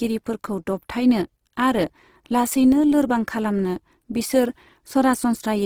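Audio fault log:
Throughout, Opus compression: the speech sounds rough and grainy, with a noisy texture in place of fine detail, though the band still reaches 20.2 kHz. The likely cause is the CELT mode refilling starved bands with folded or noise content, which fits a bitrate near 16 kbps.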